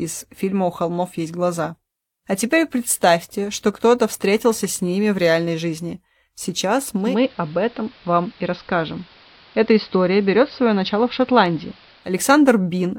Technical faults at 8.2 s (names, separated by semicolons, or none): digital radio blending to analogue